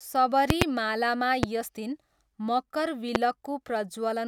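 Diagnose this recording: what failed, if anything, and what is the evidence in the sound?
Loud pops, from the analogue wiring: a double pop at 0.50–0.64 s, then single ones at 1.43–1.46 s and 3.15–3.18 s, each roughly 20 to 25 dB above the speech, which continues underneath. Likely voltage steps from a loose plug, switch or static.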